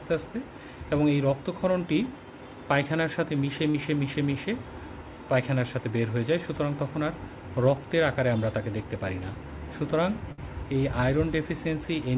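At 3.70 to 3.76 s there is a short concealed packet loss: 40 ms of audio arrived too late, and the receiver extended the preceding sound to fill it. It is heard as a brief smear. On a spectrogram it appears as a short stretch of continued, slightly blurred sound, and the waveform shows a seamless patch.

At 10.32 to 10.40 s a burst of packet loss removes about 60 ms. The receiver bridged 56 ms by continuing the last sound while turning it down, producing a held buzz or fading hiss before the audio resumes further along. The spectrogram shows a frozen, dimming band, and the waveform tapers in amplitude before the jump.

Both gaps pass through a call path whose band stops at 4 kHz, consistent with G.711 mu-law at 64 kbps.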